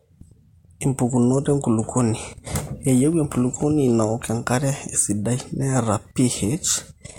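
Speech with periodic USB or driver dropouts running from 0.13 s to 7.12 s. Every 0.25 s a tiny sliver of audio, well under a millisecond, is skipped outright rather than padded with silence, so the waveform jumps and produces a small click. This happens around thirty times, evenly spaced, and the ticks are audible only where there is signal. The regular spacing points to a background task stalling the USB bus or audio driver on a fixed schedule.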